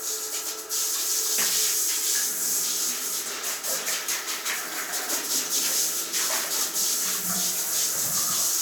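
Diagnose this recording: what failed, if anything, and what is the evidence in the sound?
Nothing in the signal chain has failed: the sounds in the recording come through intact and continuous, with no audible defect from any stage between capture and playback.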